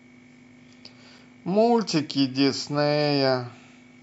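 A gap between stream segments interrupts this speech clip at 1.19 s: the time stamps of two consecutive segments, which here run about 2.0 s each, fail to meet, and the player covers the missing stretch with digital silence. The result is a single brief hole with hard edges, adding roughly 4.2 ms to the timeline. Nothing is lost from the audio itself.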